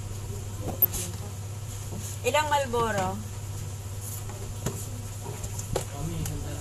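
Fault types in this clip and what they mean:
MP2 compression: A dull, gurgling, granular texture runs through the whole clip, with upper bands flickering in and out. This is likely MPEG Layer II coding, in line with roughly 80 kbps. Unlike burbling, the damage is steady rather than bursting.
DAB burbling: From 0.68 to 0.96 s a burst of short noise blips sits over the sound in single sub-bands, consistent with about a dozen damaged frames from a bit error rate under half a percent. Unlike the steady compression damage, it comes and goes suddenly.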